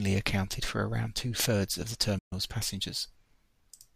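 A speech recording with one digital broadcast dropout: just after "of the", the sound fades out over about 8 ms at 2.18 s and stays silent until 2.33 s, when it resumes mid-flow. The receiver stopped getting valid frames, either from signal loss or failed checksums, and muted until good data returned. The roughly 128 ms hole fits about four lost frames, and the audio sent during that gap is gone.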